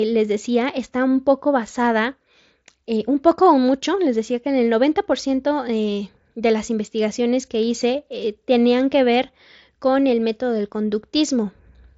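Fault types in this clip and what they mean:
No faults are present in this speech clip.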